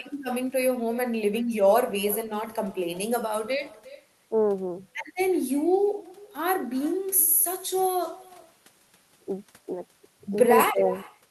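From the start of the speech to the end, echo with no canceller is present. The far end's loudspeaker feeds its microphone, and nothing strips that return. Each phrase comes back roughly 0.4 seconds later. The copy sits about 21 dB down, thin.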